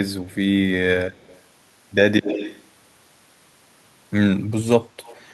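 A faint delayed copy of the speech surfaces at 0.29–0.35 s and 1.12–1.42 s, then returns strongly at 2.23–2.64 s, nearly as loud as the original, and faintly again at 5.05–5.21 s. Each copy trails by 144 ms. This is echo leak, likely from a loudspeaker on the far end whose echo canceller let some pickup through. Unlike room reverb, it is a discrete, fixed-delay repeat in scraps, not a smooth decaying tail.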